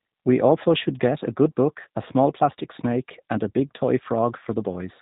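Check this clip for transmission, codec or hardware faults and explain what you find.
One fault runs through the whole clip: G.729 codec damage. Throughout, speech is rebuilt from a vocal-tract filter, pitch predictor and sparse pulses, fitting roughly 8 kbit/s, so it sounds rough and synthetic; the spectrogram shows nothing above 3.8 kHz.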